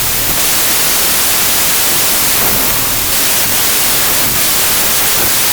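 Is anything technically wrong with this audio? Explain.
Yes. A wrong sample width runs through the whole clip. The sound fits packed 24-bit data being read as 16-bit samples, so many values are built from mismatched bytes. Only some keep the real signal's top bits. The result is loud, harsh noise with the original faintly audible beneath it, playing at 0.667 times its proper speed and pitched down to match. That change in speed and pitch separates it from a byte-order fault, which keeps timing intact.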